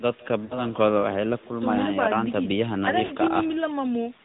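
From the start to the end of the speech, an echo with no canceller is present. At the far end the call plays through a loudspeaker, the microphone picks it up again, and nothing strips that return out, so the talker's own speech comes back after the network round trip. Here it trails each phrase by around 150 ms, about 25 dB below the direct sound: a faint, thin shadow behind every syllable.

Also throughout, the AMR narrowband mobile codec is plainly audible. Everything is squeezed into an 8 kHz sampled band, so nothing above 4 kHz survives and the speech sounds boxed and dull. The codec rebuilds the voice from a vocal tract model excited by a handful of pulses per subframe, and at this rate, which fits the 10.2 kbps mode, that leaves a buzzy, synthetic edge on the speech.

From 0.46 to 0.65 s come lost AMR speech frames. Radio errors made frames fail their check, so the decoder filled the gap by repeating its last good pitch and vocal tract settings at falling gain. 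The missing stretch, about 40 ms and consistent with two lost 20 ms frames, is heard as a brief smeared, warbling dip before the speech returns somewhat rough. The same fault recurs from 3.06 to 3.14 s, with another 40 ms gap giving a similar short drawn-out warble and a ragged recovery.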